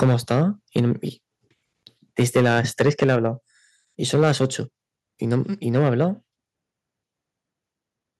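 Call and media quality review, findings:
Microphone overload: harsh, crackly tops on the loudest speech at 0.02–0.43 s, 0.76–0.80 s, 2.19–3.27 s, 4.13–4.46 s, 5.32–5.35 s and 5.75–6.04 s. Likely mic input gain set too hot. Peaks run past converter full scale, from about 1 dB over at 5.32 s up to about 11 dB over at the start, so a small slice of each waveform gets its tops sheared flat.

Microphone volume stepped down: sudden level drop in both speech and background at 0.03 s (about 3 dB) and 3.04 s (about 4 dB). Each lands right inside a clipped stretch. Likely the call software's input auto-gain spotting the overload and knocking the device volume down in one step rather than easing it.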